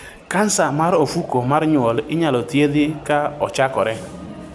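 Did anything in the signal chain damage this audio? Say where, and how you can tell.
No, nothing along the chain has audibly damaged this speech recording: its level, continuity and frequency content hold steady throughout, with no sign of trouble at any stage.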